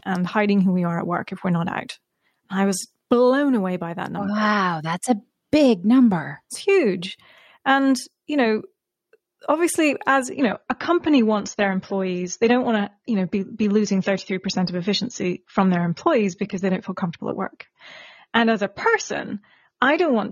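An adaptive stream at a lower bitrate takes over this speech clip at 10.32 s, just after "obviously as", and holds to the end at 20.32 s: the player switched to a cheaper version of the stream when the connection slowed. The change is abrupt but seamless. Codec artefacts rise, which fits a step from roughly 96 kbit/s down to 24 kbit/s AAC.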